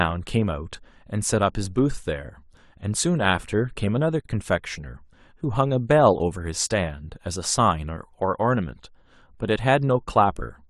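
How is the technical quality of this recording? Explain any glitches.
The speech cuts out briefly at 4.21 s: a silence of about 46 ms with smeared edges, then it resumes where it stopped. This is a gap at a join of encoded pieces, where separately encoded segments, apparently about 6 s long, were joined with each encoder's start delay and end padding left untrimmed.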